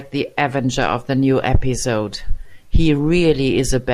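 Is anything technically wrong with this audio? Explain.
No, nothing in this one stands out technically; it's just a short bit of speech that comes across without any audible fault.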